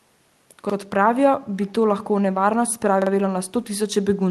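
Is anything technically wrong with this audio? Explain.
Yes, a couple of things. There's a repeated buffer at 0.70 to 0.74 s and again at 3.02 to 3.11 s. New audio didn't reach the device in time, so it replayed the last chunk: once the first time, twice the second. Each replayed chunk is about 46 ms, which fits a 2048-sample buffer. You hear a short stutter with hard joins, and nothing seems to drop out.

Around 1.66 to 1.73 s there's an echo leak: a faint copy of the voice, roughly 165 ms late and about 25 dB below the speech, heard as a brief scrap. It's likely a far-end loudspeaker whose echo canceller let some of its mic pickup slip back through the call.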